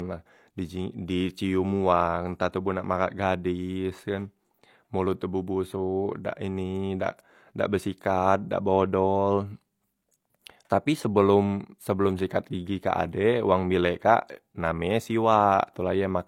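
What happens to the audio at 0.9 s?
At 0.9 s the speech carries the same artefacts heard across the whole clip: low-bitrate audio saved at a high bitrate. The sound has the smeared, thin texture of a heavily compressed first encoding, which fits 32 kbit/s HE-AAC. It was likely re-encoded as 256 kbit/s MP3, which preserves those losses but cannot restore what was discarded.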